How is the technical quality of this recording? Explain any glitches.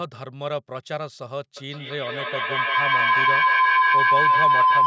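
The recording is marred by feedback howl. From 1.57 s to the end, a microphone-to-loudspeaker loop with gain above unity builds a tone around 1 kHz, with repeats roughly every 150 ms and peaking about 12 dB above the speech. On a spectrogram it shows as a bright horizontal band; the waveform envelope swells.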